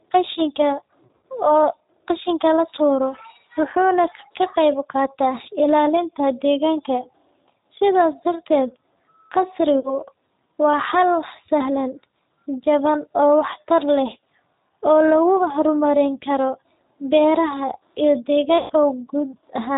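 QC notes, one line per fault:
throughout: G.729 codec. The speech passes through an 8 kbit/s G.729A coder that rebuilds each 10 ms frame from a vocal tract filter, a pitch predictor and a few pulses rather than the actual waveform, so the voice sounds plainly rough and slightly synthetic. Nothing above 4 kHz survives, which leaves sibilants dull and the whole clip narrowband, while any background noise takes on a warble.
1.07–1.23 s, 9.80–9.93 s, 18.58–18.73 s: VoIP packet loss concealed by the speech codec. In each gap the decoder has no new frames, so it extends its last pitch and filter at falling gain, stretching the sound into a fading buzzy tone or coloured noise. About 100 ms goes missing in scattered pieces over 160 ms in the first, the longest stretch 60 ms; 40 ms in the second; 120 ms right after "beeraha iyo" in the third. The voice stays weak briefly after each.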